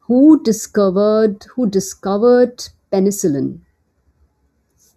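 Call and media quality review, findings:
Channel delay (comb filtering), throughout the speech. Hollow, phasey tone. One channel lags the other by a fraction of a millisecond before the mono sum, so shared content cancels at fixed, evenly spaced notches, the first around 3 kHz.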